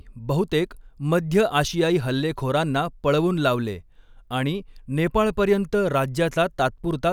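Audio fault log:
No audible faults detected.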